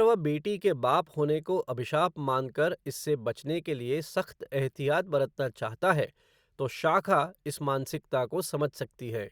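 No technical faults are audible.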